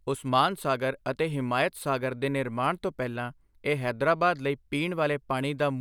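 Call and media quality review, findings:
No faults found in speech.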